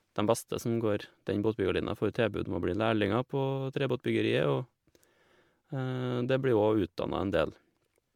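From start to finish the speech has that swirly, hollowed-out quality of generation loss, and it doesn't let up anywhere in the clip. Consonant attacks are blurred, and there's a smeared, watery texture around everything that sounds worse than a single 128 kbit/s MP3 pass would ever give you. The likely cause is the audio going through an MP3 decode and re-encode cycle around ten times, each pass landing on a shifted frame grid and piling up fresh quantisation noise and spectral holes.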